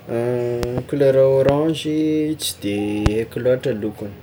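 Sharp, loud pops cut across the speech three times. A double pop sounds between 0.63 and 0.80 s, peaking about 15 dB above the speech. Single, harder pops follow at 1.49 to 1.51 s and 3.06 to 3.09 s, each about 20 dB above it. The speech carries on underneath each one. These are likely sudden voltage pulses from a plug, switch, static or driver glitch, which the following circuitry shapes into brief thumps.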